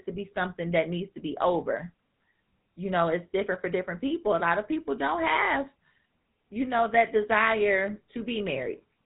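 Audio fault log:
throughout, GSM full-rate codec: the speech has passed through the original GSM full-rate codec, and the plainly audible damage fits its 13 kbps rate. The codec keeps a vocal-tract model and rebuilds the excitation from regularly spaced pulses, discarding two of every three excitation samples. That coarse excitation gives the speech a buzzy, gravelly roughness. Nothing above about 3.8 kHz survives, which leaves the sound narrow and dull.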